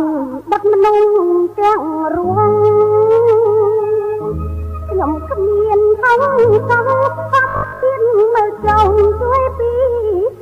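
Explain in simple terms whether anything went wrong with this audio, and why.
From 7.49 to 7.85 s the sound turns into a rigid, metallic 50 Hz buzz: robotic sound from repeated short buffers. Most of that stretch is a likely repeat of the same 20 ms scrap. Unlike a dropout, the gap is filled with a steady fixed-pitch hum rather than silence.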